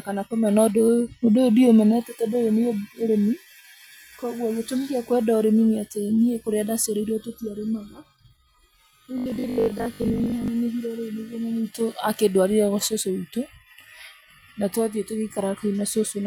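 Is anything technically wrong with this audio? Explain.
Yes. Robotic sound from repeated short buffers runs from 9.18 to 10.48 s, just before "nenehire rĩ nĩguo". The speech turns into a stiff, metallic 50 Hz buzz, likely caused by audio arriving late and the last 20 ms being looped, with roughly half the real sound skipped.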